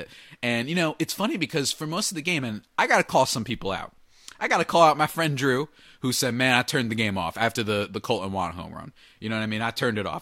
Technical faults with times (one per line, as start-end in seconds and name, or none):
3.49 corrupt frame decoded